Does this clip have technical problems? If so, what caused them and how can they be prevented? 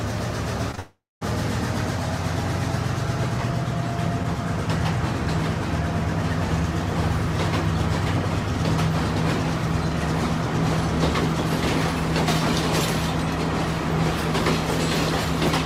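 Yes. Two short concealed packet losses come back to back, at 0.71 to 0.75 s and 0.75 to 0.79 s, each about 20 ms of missing audio. The receiver bridged each hole by extending the preceding sound and crossfading back, so they register as a quick smear or wobble rather than a gap. Unlike a dropout, the real signal resumes almost at once. A larger jitter buffer and forward error correction would prevent these.

Straight after, from 0.79 to 1.23 s, the sound turns into a fading synthetic continuation, then about 230 ms of near silence before the audio returns with roughly 0.42 s gone. This is a long network dropout, likely caused by a connection stall that delivered nothing for that stretch. What separates it from the brief losses is the length: the concealment runs out and the audio goes silent instead of blending back. A more stable network path, such as wired rather than congested wireless, would prevent it.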